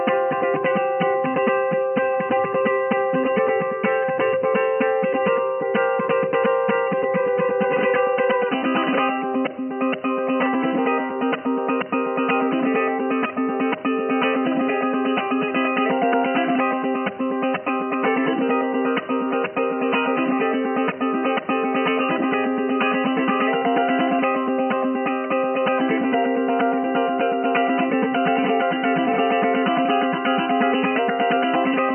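From 18.62 to 20.62 s the audio drops abruptly to a lower-bitrate adaptive stream: artefacts rise, consistent with a brief switch to a low-rate HE-AAC rendition.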